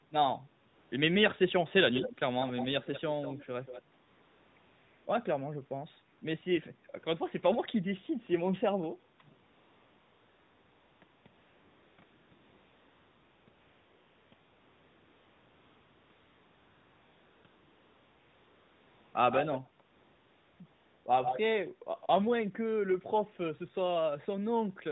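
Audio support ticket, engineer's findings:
AMR comfort noise: steady, smooth hiss replacing the real background in pauses, switching in and out. 0.68–0.92 s, 4.02–5.06 s, near-continuous 9.48–19.14 s, 19.86–21.06 s; stretches 0.22–1.76 s. No speech frames sent, so the receiver synthesises the noise. Unlike a dropout, the gap fills with noise rather than silence.

Echo leak: delayed, quieter copy of the talker, from about 5 dB down to faint. At 1.93, 2.41, 3.21 and 3.64 s with a 187 ms lag, and at 19.31, 21.24 and 22.0 s with a 145 ms lag. Likely an echo canceller leaving residue from a loudspeaker phone. Unlike reverb, it is a discrete repeat at a fixed delay.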